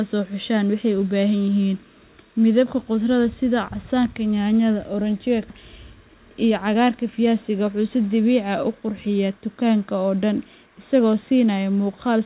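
At 5.50 s a stretch of this speech was dropped while later audio was already waiting, the pattern of a skip ahead. Nothing was inserted to cover the loss, so about 0.7 s of audio is simply missing and the speech before and after the cut is butted together. The listener hears an abrupt jump forward, with a syllable or more gone and the sound resuming mid-stream as if a piece had been snipped out.

From 5.62 to 7.43 s the jitter buffer was still holding more audio than its target, so it performed a jitter buffer speed-up. It repeatedly cut out short slices of one or a few pitch periods, removing roughly 150 ms in total. The speech plays at about 108% of its normal rate while the pitch stays put, so this stretch sounds slightly rushed. All of this sits on the narrow G.711 A-law call sound, which has nothing above 4 kHz.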